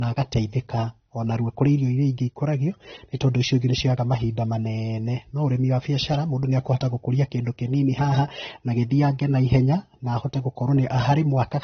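Throughout, the speech stops dead at 6.3 kHz, a flat ceiling on a spectrogram, with smeared detail below: likely low-bitrate audio saved at a high bitrate.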